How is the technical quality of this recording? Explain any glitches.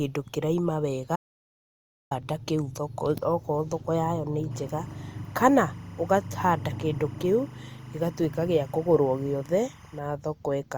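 The recording has two technical faults.

An audio dropout to silence runs from 1.16 to 2.11 s, right after "kĩraima wega". The speech cuts off into silence with no room tone for about 0.95 s, likely from a momentarily lost input.

Timecode bleed is present from 4.51 to 9.99 s, starting after "thoko yayo nĩ". Leaking 25 fps timecode adds a chirping warble around 1 and 2 kHz, roughly 30 dB below the speech.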